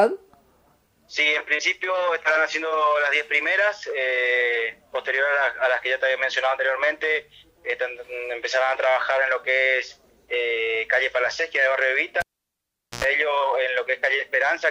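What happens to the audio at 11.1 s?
Nothing goes wrong at 11.1 s; the audio there plays through intact, with no dropout, click, distortion or other fault.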